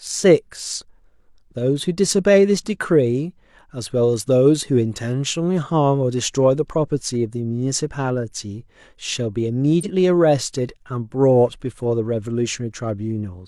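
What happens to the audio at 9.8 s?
At 9.80 to 9.86 s, compressed frames are skipped. About 50 ms of audio never plays. The speech jumps ahead.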